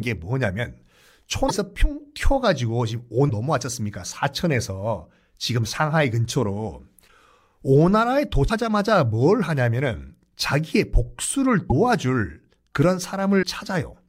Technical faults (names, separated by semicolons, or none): broken MP3 bit reservoir